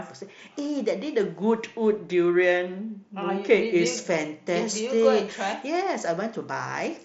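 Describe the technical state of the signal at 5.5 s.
At 5.5 s the speech has pre-emphasis left on, a fault running from 3.86 s to the end at 7.05 s. A treble boost following the FM 50 µs curve was applied without the matching de-emphasis, so the highs sit about 10 dB above 1 kHz at 10 kHz. It sounds thin, bright and hissy on sibilants. On a spectrogram the upper bands turn abruptly brighter from 3.86 s onward. The waveform shows spikier, sharper-edged peaks on fricatives.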